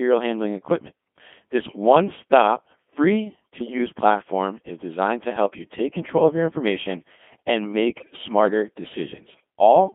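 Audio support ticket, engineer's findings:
Codec 2 vocoder, whole clip: robotic, buzzy speech limited to 200 Hz to 3.4 kHz, consistent with 2.4 kbit/s sine-wave resynthesis. Spectrogram shows rigid harmonic combs with no natural noise texture.

Bit errors on digital voice radio: 3.58–3.78 s, after "one stop free", before "platform is designed to"; 7.99–8.16 s, after "of your information and". Warbling bleeps with sudden pitch and level jumps. Around one bit in twenty corrupts frame parameters. Spectrogram shows blocky harmonic stacks shifting abruptly.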